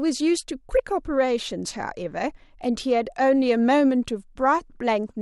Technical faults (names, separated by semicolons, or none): none